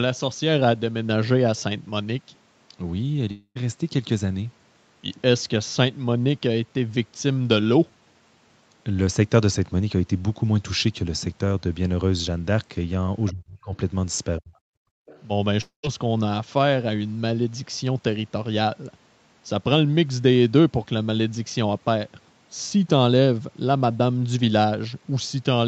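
At 3.31 s the sound breaks off for about 240 ms, until 3.57 s. This is a long network dropout, likely. The receiver carries the last sound on as a fading buzz. About 70 ms of silence follows before the audio resumes, with that part lost.

From 13.30 to 13.73 s the speech dips sharply, by about 30 dB at its deepest. It dips again from 14.39 to 14.53 s. This fits speech suppressed in double talk, likely. The echo canceller could not tell the talker from the loudspeaker echo, so it turned both down.

From 14.81 to 15.06 s the room sound drops by about 31 dB. This is background gated by the echo canceller. It clamped the microphone while the loudspeaker played, and the room sound returns when it releases.

From 15.06 to 15.23 s a faint second voice comes through, about 30 dB below the speech. This is the other side's voice leaking through, likely. The echo canceller left a residue of the loudspeaker signal in the microphone.

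At 15.61 s a second long network dropout, likely again, cuts about 220 ms, until 15.85 s. The fill fades out into about 120 ms of silence. The audio then picks up further on, with the gap missing.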